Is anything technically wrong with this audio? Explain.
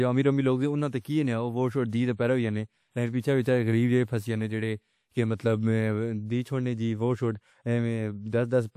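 Yes. There is one fault, a pre-echo, from 1.00 to 1.05 s. A transform codec has spread its quantisation noise across a whole block of this speech. A sharp attack sits late in that block, so noise scaled for the loud onset also fills the quiet stretch just before it. That smear lasts about 48 ms. You hear a brief hiss leading into the attack, and the onset itself loses its crispness.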